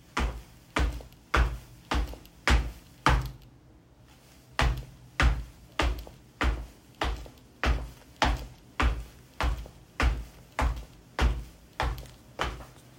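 No technical faults can be heard anywhere in this recording. Nothing in the sound points to a problem in how it was captured or played back.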